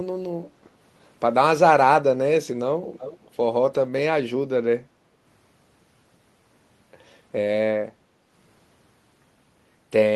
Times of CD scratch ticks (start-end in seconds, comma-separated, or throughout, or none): none